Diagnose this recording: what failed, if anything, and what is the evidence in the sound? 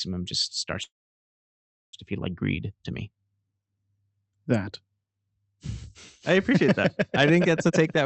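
A call audio freeze sits between 0.83 and 1.95 s, after "just starts" and before "to feel like". The sound briefly carries on as a fading tail, then goes silent for about 1.02 s, and resumes exactly where it stopped with nothing lost. This is most likely a network stall that drained the receiver's jitter buffer. On a waveform it looks like a flat gap about 1.0 s long. The spectrogram shows a brief smeared tail and then an empty band, with the band-limit near 8 kHz from the call codec continuing on both sides.

A jitter buffer speed-up runs from 7.69 s to the end, after "I think that's a". The audio plays at about 117% of normal speed with unchanged pitch, so the ending sounds hurried. The buffer had built up extra delay and shed it by cutting pitch-period-sized slices, around 70 ms in total. The waveform shows whole periods dropped, while the remaining periods keep their length. The spectrogram keeps the harmonic spacing the same while syllables and formant movements shorten in time.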